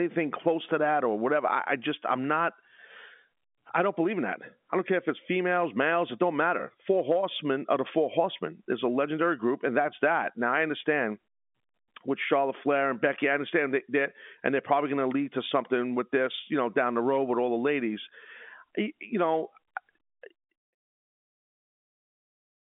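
Nothing stood out on listening to this speech recording.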